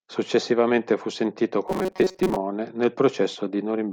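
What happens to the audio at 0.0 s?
Nothing goes wrong at 0.0 s; the speech starts cleanly, with no dropout, click or distortion at that point.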